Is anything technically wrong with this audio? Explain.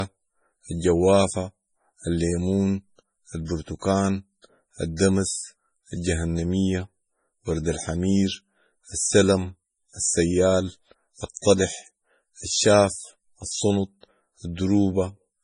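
Yes. Throughout the speech there's nothing above 10.5 kHz, with a dull, swirly, low-bitrate texture. It's likely low-bitrate audio saved at a high bitrate: an MP3 squeezed to something like 24 kbit/s, then re-saved near 320 kbit/s, which can't restore anything already stripped away.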